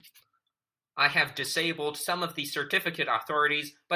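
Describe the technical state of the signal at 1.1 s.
At 1.1 s the speech signal is intact, with no audible fault at that moment.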